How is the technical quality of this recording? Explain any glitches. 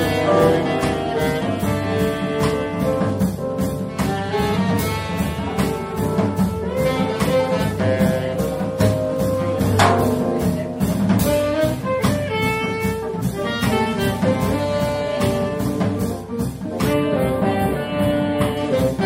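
One glitch stands out near the end. From 16.93 to 18.57 s the sound turns hollow and phasey, with a dip around 7 kHz. This is channel delay (comb filtering): one channel lags by only a few samples and, summed to mono, cancels the shared content at evenly spaced frequencies.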